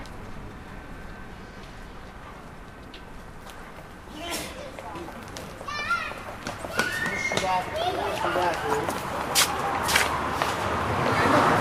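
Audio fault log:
No fault can be heard anywhere in this recording of sounds. There is nothing to log.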